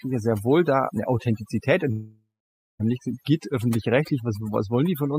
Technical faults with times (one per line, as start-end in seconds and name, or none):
0.00-5.18 overdone noise removal
1.91-2.81 long network dropout